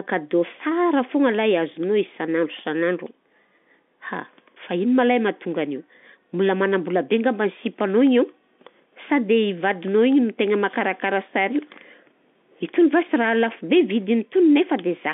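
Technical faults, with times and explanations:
No technical faults; the speech sits in the narrow band of G.711 telephone coding, about 200 Hz to 3.5 kHz, as a fixed phone line delivers it.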